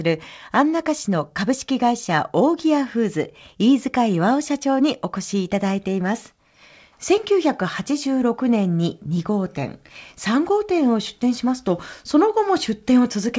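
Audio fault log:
No faults are present in this speech clip. It has passed through a WebRTC call path, and nothing sounds above 8 kHz, which fits a wideband call codec such as G.722.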